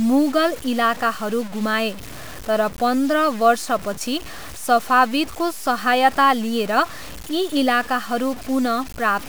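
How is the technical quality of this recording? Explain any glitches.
The technical quality is poor. A grainy distortion runs through the whole speech clip, from start to finish. This is the sound of low bit depth without dither. The likely cause is samples truncated to a very coarse resolution, which fits a 6-bit signal, with no dither added. The error tracks the voice, so it rasps and shifts as the speech moves. Quiet passages grow gritty and sputter. The distortion sits roughly 20 dB below the speech.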